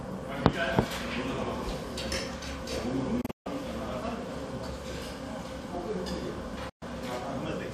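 Digital broadcast dropouts at 3.21 to 3.47 s and 6.69 to 6.83 s: the receiver muted over corrupt or missing frames, fading out in 8 ms. The first is broken up into holes totalling 192 ms, longest 144 ms. The second is a single 120 ms gap.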